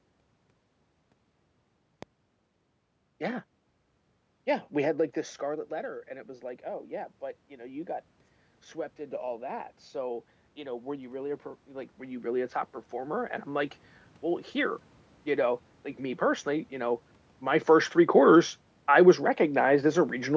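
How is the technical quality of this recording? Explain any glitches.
Two technical glitches stand out in this speech recording: a single loud pop near the start and a slow automatic gain rise in the middle.

The loud pop comes at 2.03 s and lasts about 20 ms. A sudden electrical pulse was added on top of the audio, likely from a plug, a switch, static or a driver glitch. The circuits after it shaped that pulse into one sharp click. It peaks around 10 dB above the speech. The speech continues underneath without a break.

The automatic gain rising runs from 9.2 s to 14.8 s. The gain control judged the input too quiet and turned itself up step by step, by about 9 dB in all. It did this slowly, over more than five seconds. So the voice and the room noise swell together. That shared swell sets it apart from the level changes near 5 s and 17 s, where the talker simply moved relative to the microphone.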